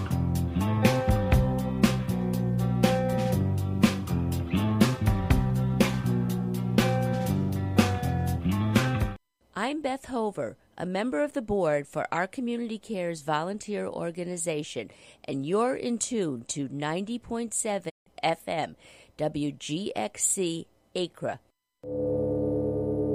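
At 17.88 s the receiver lost valid frames and muted, a digital broadcast dropout: the sound fades out over 20 ms, leaving 160 ms of silence until 18.08 s.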